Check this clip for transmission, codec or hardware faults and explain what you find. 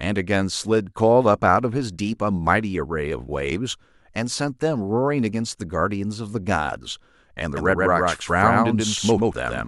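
A doubled audio track runs from 7.57 s to the end of the speech clip. A second, full-band copy of the same speech enters abruptly and trails the original by roughly 150 ms at about the same loudness, most likely because the signal is being captured twice, once through a slower path, or an edit is holding two copies out of step. The copy has no decay or room colouring, so it sounds like a hard, flat echo stuttering behind each syllable.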